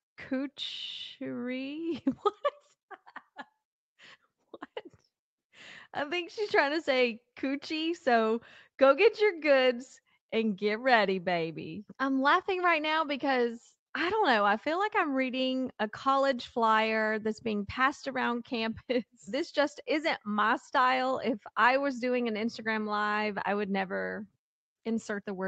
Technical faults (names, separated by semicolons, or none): none